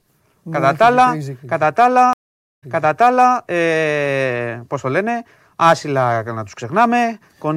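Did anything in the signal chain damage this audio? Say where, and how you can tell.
Yes. Stream reconnect at 2.13 to 3.35 s, a network fault: after "κατά τα", 0.49 s of silence, then a restarted decoder resumes 0.73 s earlier, at "ε πώς το λένε".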